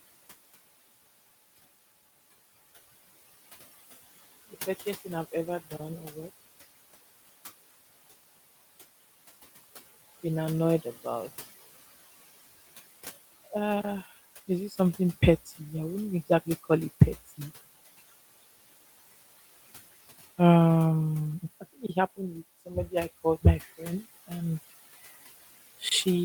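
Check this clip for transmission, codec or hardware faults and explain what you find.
One fault runs through the whole recording: noise suppressor artifacts, present from start to finish. A suppressor in the chain estimates which frequency bands hold steady background noise and turns them down frame by frame, here by about 15 dB. The room noise, sitting about 19 dB below the speech, drops away in the pauses and comes back up underneath each phrase, so the background pumps in step with the talking.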